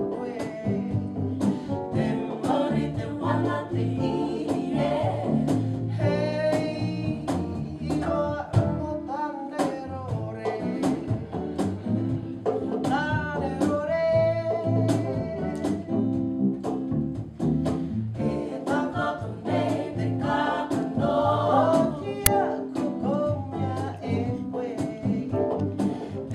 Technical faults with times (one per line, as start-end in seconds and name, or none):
22.26 uninitialised buffer